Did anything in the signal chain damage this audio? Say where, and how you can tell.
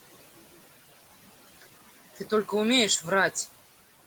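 Yes. Call processing left noise suppressor artifacts across the whole of the speech, from start to finish. The background sinks by about 14 dB in the gaps between words and comes back up underneath them. The suppressor judges each frequency band, frame by frame, as steady noise or speech and turns down the noise bands. The room noise sits about 19 dB below the speech.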